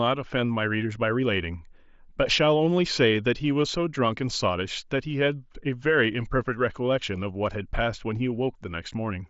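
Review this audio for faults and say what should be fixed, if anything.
Nothing stood out on listening to this speech, so nothing here needs fixing.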